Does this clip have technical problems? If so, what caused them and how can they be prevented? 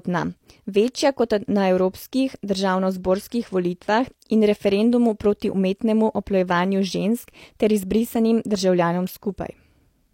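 Yes, two bit error spikes tick sharply at 0.88 s and 9.09 s: a flipped bit briefly jolts a few samples by a power of two. Use error-checked memory and links.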